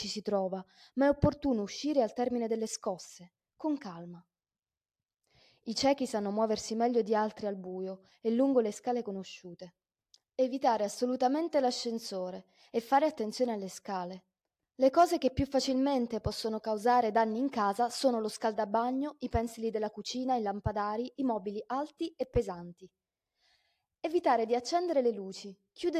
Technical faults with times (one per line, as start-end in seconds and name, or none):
none